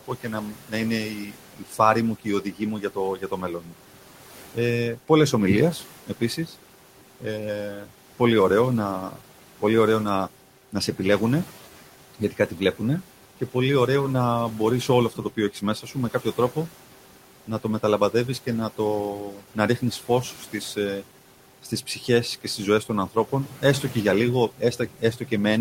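From the start the noise suppressor artifacts run through the whole recording. The room noise, about 18 dB below the speech, is pulled down by about 12 dB in the gaps and swells back under each phrase. A spectrogram shows the noise floor pumping frame by frame, with speckled, patchy bands.

Speech cut by the noise suppressor appears three times. From 0.01 to 9.22 s, ending just before "πολύ ωραίο να", soft consonants and word endings, roughly two seconds of them in all, drop by up to about 13 dB and sound swallowed. The waveform shows word tails sliced thin, and the spectrogram shows faint high-frequency consonant energy blanked out.

From 10.72 to 13.55 s, between "πολύ ωραίο να" and "ωραίο να μπορείς", a brief stretch of about a fifth of a second is turned down by up to about 12 dB, so a quiet fragment goes faint.

From 14.88 s, after "ωραίο να μπορείς", to the end, quiet speech is again treated as noise and drops by up to about 11 dB. 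The waveform shows abrupt dips at phrase edges, and the spectrogram shows gaps where fricatives should be.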